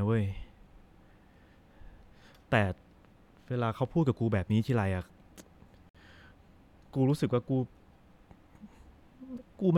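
At 5.89 s the speech just drops out for about 54 ms, right up to 5.95 s, and that's a classic gap at a join of encoded pieces. The audio was evidently encoded in separate chunks, roughly 6 s each, and glued back together without trimming, so the encoder's start-up silence and end-of-chunk padding both stayed in. You hear a quick hole with smeared edges, then the speech resumes exactly where it left off.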